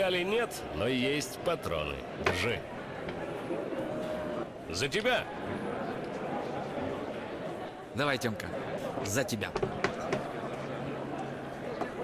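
Nothing technically wrong can be heard anywhere in the audio. There are no events to place in time and no causes to trace.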